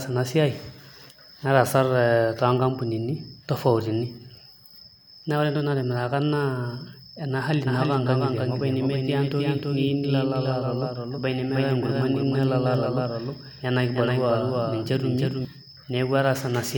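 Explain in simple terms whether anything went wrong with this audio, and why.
Right after "ena hali", at 7.67 s, a doubled audio track kicks in: a slightly quieter copy of the same speech trails about a third of a second behind until 15.45 s, then cuts off. Likely a second, slower capture path got mixed in.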